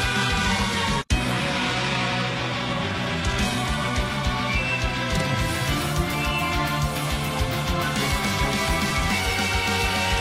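From 0.0 to 4.0 s the audio plays from an adaptive stream starting at a low bitrate. The player picks a thin version of the stream so playback begins at once, then moves to a better one after measuring the connection. In this opening stretch the treble sounds synthetic and coding artefacts are prominent, which fits a very low-rate HE-AAC encode around 16 kbit/s. At 4.0 s quality steps up abruptly with no gap, consistent with a move to AAC-LC at about 96 kbit/s. Nothing is heard above 12.3 kHz.

From 7.65 to 9.32 s there are CD scratch ticks. A scratch or blemish wipes out more data on each revolution than the disc's error correction can rebuild, so the player interpolates or mutes the damaged samples. The result is a regular train of nine short ticks, roughly five or six per second, each lasting a few milliseconds at most. They are uneven in strength.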